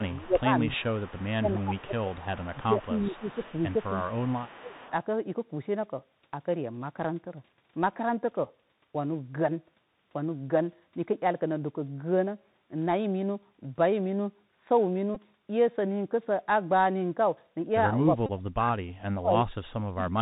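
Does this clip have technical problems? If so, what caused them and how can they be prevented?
Yes. The speech carries Bluetooth CVSD headset codec damage throughout: nothing above 4 kHz, scratchy s sounds and granular hiss from one-bit, 64 kHz slope coding that lags loud highs. Unlike ordinary low-pass filtering, the grit rides on the speech itself. Prevent it by using a wideband headset profile such as mSBC or LC3.

Speech suppressed in double talk pulls the voice down by about 20 dB at 0.00–0.92 s, about 15 dB at 1.39–3.42 s, about 20 dB at 4.38–4.85 s, and by as much as about 40 dB at 18.1–19.37 s and from 19.7 s to the end. The likely cause is an echo canceller that couldn't separate the talker from loudspeaker echo. Prevent it with a double-talk-robust canceller or a headset at the far end.

An echo leak runs from 0.07 to 4.91 s: a copy trailing 331 ms behind, about 25 dB down, likely from an incompletely cancelled loudspeaker path. 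Its fixed lag separates it from room reverberation. Prevent it by lowering speaker volume or improving echo cancellation.

Bluetooth headset packet repeated gives a brief buzz near 267 Hz at 15.15 s, lasting about 15 ms, and a brief buzz near 267 Hz at 18.26–18.30 s, lasting about 26 ms. The sound points to a few lost 3.75 ms packets being decoded again. Its pitched buzz separates it from a plain click. Prevent it by keeping the headset close and away from interference.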